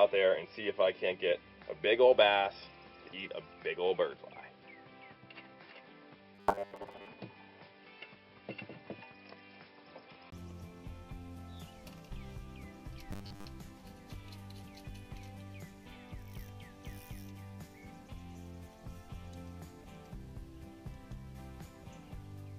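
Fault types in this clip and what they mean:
Input switched to a poorer device: From the start to 10.32 s the sound is dull and boxy. A brief 20 ms gap marks the change, and the full band returns after it. The level stays about the same on both sides. Before the change there is a faint extra noise floor, far below the signal. This points to the likely cause, a narrower, noisier input device that was active first and then swapped out.
Robotic sound from repeated short buffers: The sound turns into a rigid, metallic buzz from 6.35 to 7.07 s and again from 13.13 to 13.46 s. The buzz sits at a fixed 100 Hz, which fits a 10 ms slice of audio being replayed over and over. In the first stretch roughly half the audio is repeats. In the second, most of it is. The likely cause is audio arriving too seldom, with gaps filled by repeating the last buffer.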